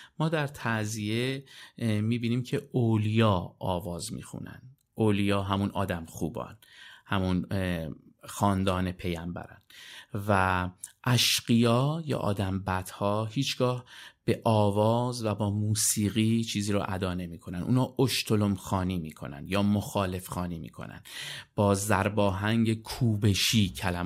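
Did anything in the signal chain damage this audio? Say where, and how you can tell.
No, nothing in the chain audibly damaged this recording.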